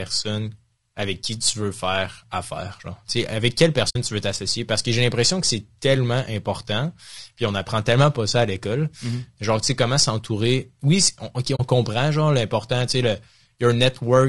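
It's speech, and the whole thing sounds rough and grainy, with noise between the harmonics, most likely low-delay AAC compression (AAC-ELD) at something like 32 kbps. There's also AAC frame loss with muting: a soft fade-out gap from 3.89 to 3.96 s after "avec quelle", before "tu veux t'associer", and another from 11.55 to 11.60 s just before "comprend genre l'important tu". Both are soft-edged holes, which fits about three and then two frames being zeroed by the decoder.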